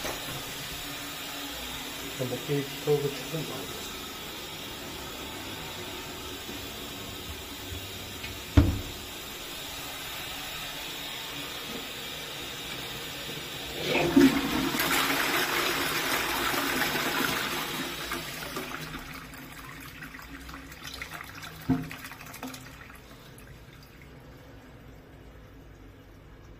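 No technical faults are audible anywhere in the recording.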